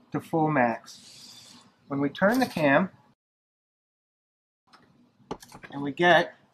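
A rebuffering stall runs from 3.14 to 4.67 s. Playback had used up its downloaded audio and paused until more data arrived. The sound drops abruptly to silence for about 1.5 s, then picks up exactly where it left off, with nothing skipped, only time added.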